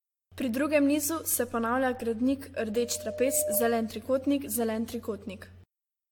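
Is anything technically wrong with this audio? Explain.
Yes, two things. The whole speech clip has a swirly, hollow quality, with smeared consonant attacks and nothing above 18.6 kHz. That's generation loss, and the likely cause is the audio being run through a lossy AAC-type encoder around five times at roughly 100 kbit/s. Each re-encode quantises again on a shifted frame grid, so the noise and spectral holes pile up and sound worse than any single pass at that bitrate would.

Then, right after "nizu se ponavlja gradnik", there's a loudspeaker feedback squeal from 2.68 to 4.06 s. A mic was picking up the speaker it was feeding, and at 603 Hz the loop gain went past one, so that frequency kept reinforcing itself. You hear a single tone swell over roughly 0.7 s until it's about as loud as the speech.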